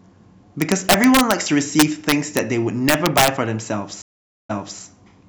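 Integer overflow at 0.62–1.32, 1.80–2.39 and 2.89–3.28 s. Speech peaks about 8, 4 and 6 dB over the limit wrap to the opposite sign, causing violent cracks that show as full-range waveform flips and broadband spectrogram streaks.

Stream reconnect from 4.02 to 4.80 s. The connection drops, leaving a flat 475 ms gap in the waveform and a blank spectrogram column. A fresh decoder then resumes the speech 0.3 s earlier, repeating a moment.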